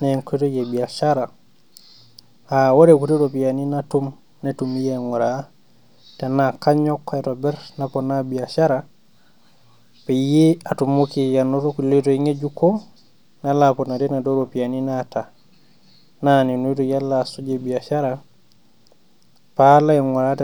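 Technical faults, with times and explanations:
No technical faults can be heard in this speech recording.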